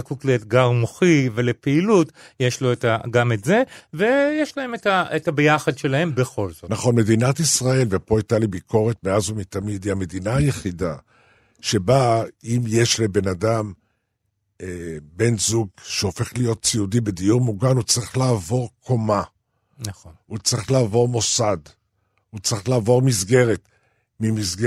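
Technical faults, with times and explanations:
Nothing technical goes wrong anywhere in this speech recording, so there's nothing to list here.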